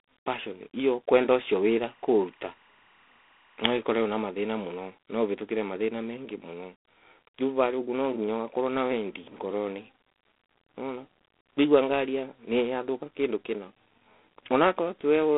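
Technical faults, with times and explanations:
Throughout, G.726 ADPCM: the speech has a harsh, rasping hiss that rises and falls with its level, which sounds like G.726 at 24 kbit/s, where each sample carries only three bits of difference from the predicted value. Telephone band runs 300 Hz to 3.5 kHz, nothing above 3.8 kHz.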